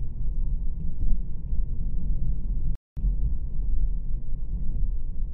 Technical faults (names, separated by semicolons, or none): channel delay (comb filtering); playback stall